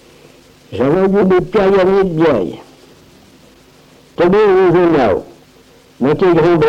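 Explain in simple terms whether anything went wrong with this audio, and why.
Small hiccups run through the sound from about 0.15 s to 6.63 s. It skips ahead in tiny jumps, so the pace feels slightly uneven and hurried, at roughly 104 percent of its natural speed. These are repeated timing corrections: the receiving side keeps trimming away short slivers of audio, always in the same direction and at irregular gaps, to avoid falling behind. Each cut is brief, so the result sounds like an unsteady tempo rather than a clear break.

The reason for all that trimming is clock drift between sender and receiver. The device that sent the audio ran its internal clock about 4 percent faster than the device playing it back. Audio therefore arrived a little quicker than it could be played, and the waiting buffer kept overfilling. Throughout the clip, the only way to keep up was to drop small pieces now and then, which causes the skipping described above.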